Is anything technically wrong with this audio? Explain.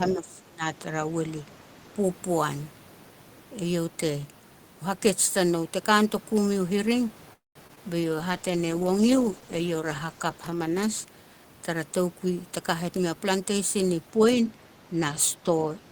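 Yes, there are several call-path problems in this speech.

From 0.0 to 0.64 s the speech dips by up to about 25 dB, likely speech suppressed in double talk: the echo canceller treated overlapping talk as echo and pulled everything down. There's a smaller dip of about 5 dB at 15.13 to 15.18 s.

At 7.33 to 7.57 s the sound stalls, fades, then goes quiet for about 170 ms, likely a call audio freeze from an emptied jitter buffer. It resumes with nothing lost, just 220 ms of added delay.

Right after that, at 7.67 to 7.71 s and 7.75 to 7.79 s, there's short concealed packet loss. Around 20 ms went missing each time, and the receiver papered over it, leaving brief smears.

From 8.01 to 11.12 s there's a call bitrate drop from 32 to 13 kbps, so the encoder codes coarsely and trims the highs. It sounds rough and muffled.

At 12.26 to 13.57 s a jitter buffer speed-up trims about 200 ms of pitch periods to cut the delay. 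The speech runs about 16% fast at the same pitch and sounds hurried.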